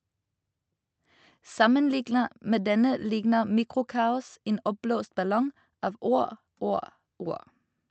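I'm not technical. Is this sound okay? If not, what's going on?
Yes, this speech recording is fine, with nothing wrong in it. It went through an ordinary internet call connection, which trims away only the very highest sounds above 8 kHz, as is normal for a call.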